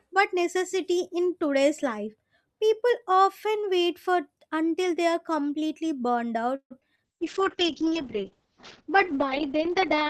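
A call audio freeze in this speech recording hits from 6.55 to 6.73 s, right after "they are completely burned": the last sound is stretched into a fading buzz or hiss that ends in about 90 ms of silence, and then the speech resumes where it stopped, about 151 ms late. This is likely a jitter buffer running dry while packets were held up in transit. Short concealed packet loss follows at 6.81 to 6.83 s and 6.95 to 7.01 s. Each time roughly 20 ms of audio never arrived, and the decoder patched the hole by extending the preceding sound before blending back, leaving a quick smear or wobble. The second patch also adds about a hundredth of a second. A call bitrate drop runs from 7.06 s to the end. The speech turns rough and muffled, and the top end is cut from 20 kHz down to 8 kHz, which points to the encoder being pushed from about 40 kbps to around 7 kbps after the bandwidth estimate collapsed.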